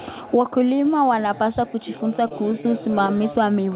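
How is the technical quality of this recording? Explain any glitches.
The recording has one glitch, a stutter near the end. The telephone-band sound, with nothing above 4 kHz, points to a G.711 call codec.

Repeated stalls (stutter) run from 2.28 to 3.34 s, just after "wanapaswa kujifunza". Late packets drained the jitter buffer nine times. Each gap, up to 26 ms, was filled by stretching the last sound. Nothing is lost, but the speech drags and stutters.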